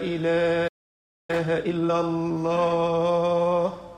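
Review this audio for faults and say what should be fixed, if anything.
Playback stall, 0.67 to 1.30 s: the sound stops mid-flow and stays silent for 0.61 s before resuming. The likely cause is the player's buffer running dry or its audio thread being blocked, so nothing reached the output until it recovered.

Time-compressed catch-up, 1.30 to 1.90 s: straight after the gap the sound runs at twice normal speed but keeps its pitch. The player is clearing its backlog by cutting out short slices and cross-fading across each join.

To prevent both, give the playback path a larger buffer and keep the audio thread free of blocking work, so it never starves and has no backlog to rush through.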